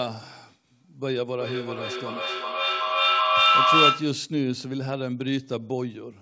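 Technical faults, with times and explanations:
1.24–4.25 s, feedback echo between two devices: another device replays this mic's audio, so phrases return roughly every 0.4 s, piling up to about 8 dB over the speech.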